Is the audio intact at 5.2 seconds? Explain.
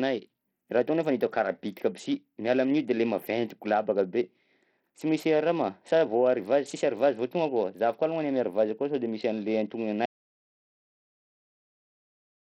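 No. At 5.2 seconds the speech carries the same damage heard throughout the clip, most likely Bluetooth SBC compression at a low bit pool, which fits a bitrate around 64 kbps. The weak upper sub-bands get almost no bits, so the treble flickers in and out while a gritty quantisation noise and aliasing sit on the sound. Unlike the swirly, watery artefacts of a perceptual codec, this damage is a coarse, band-wise grit with abrupt treble gaps.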